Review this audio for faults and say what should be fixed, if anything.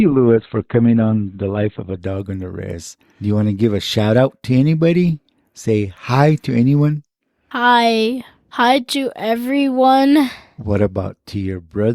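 Adaptive stream starting at a low bitrate, 0.00 to 2.00 s: the opening two seconds of speech have nothing above 4.2 kHz and stronger codec artefacts, which points to a very low Opus bitrate, around 12 kbit/s. The player chose this cheap version to begin quickly, then switched to a better one, consistent with about 64 kbit/s, once it had measured the connection, so the quality improves suddenly at 2.00 s with no gap. To prevent it, start playback on a higher-bitrate version or buffer briefly before playing.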